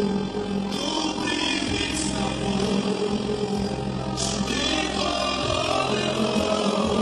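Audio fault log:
Throughout: overlap-add ripple. The audio was split into windowed frames and rejoined with an overlap whose windows do not add up to a steady gain, so the level swells and dips about 6 dB once per frame, around 40 times a second. That periodic gain wobble is heard as a fast, rough flutter, a rough tremolo over the whole sound. On a waveform the envelope shows a regular scalloped ripple; a spectrogram shows evenly spaced vertical banding in brightness.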